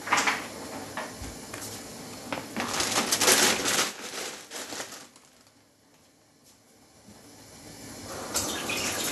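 Throughout, the sound is dull and granular, with nothing above 12.2 kHz. This is likely MP2 compression starving the upper sub-bands, consistent with about 80 kbps.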